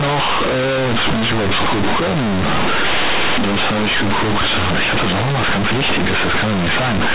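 From start to finish, the mu-law bytes from the telephone coding are played back as plain linear 8-bit samples, so the companded audio read as linear is never expanded. Each sign change flips the output across roughly half its range, so quiet passages come out as large as loud ones and the speech waveform is badly bent. The result is very loud, buzzy distortion with heavy noise filling the pauses, all within a band that stops near 4 kHz, consistent with 8 kHz telephone sampling.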